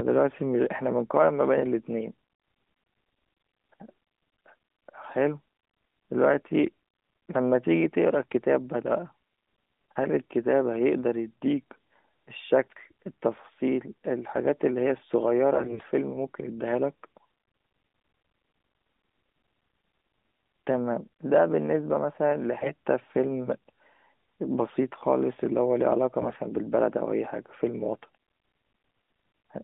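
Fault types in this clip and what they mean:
AMR bit errors: at 15.54 to 15.87 s, 22.58 to 22.72 s and 26.20 to 26.35 s, flipped bits in the weakly protected parts of the mobile codec's frames misplace the excitation pulses and skew the fine pitch, gain and spectral values, so the speech keeps its pitch and level but turns briefly hoarse, scratchy and gargly.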